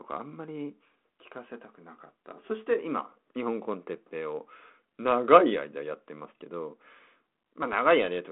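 The speech comes over a G.726 ADPCM telephone path at 32 kbit/s, limited to roughly 200 Hz to 3.4 kHz, with only the light coding roughness expected at that rate and no technical faults.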